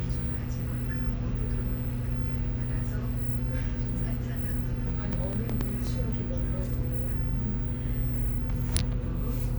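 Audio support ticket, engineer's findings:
Processor overload crackle, 5.13–5.87 s. Gritty tearing burst riding on the sound, then clears. CPU missing buffer deadlines in a run; each miss replays stale audio with hard edges. Tiny gaps fit roughly 1.5 ms buffers, around ten missed.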